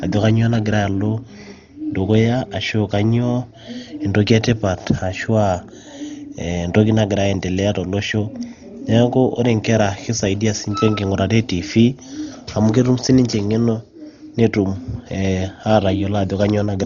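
From start to finish the speech sounds dull and boxed-in, with nothing at all above 7 kHz, and there's a rough, fluttering hiss sitting around the voiced parts. That's heavy codec damage, likely from Dolby Digital compression run at a very low rate, something around 32 kbps. Starved of bits, the encoder cuts the top of the band and leaves many frequency lines with no real data. The decoder fills those gaps with noise, which is the grainy flutter you hear.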